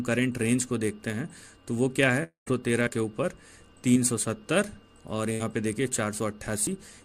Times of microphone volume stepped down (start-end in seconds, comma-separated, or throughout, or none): none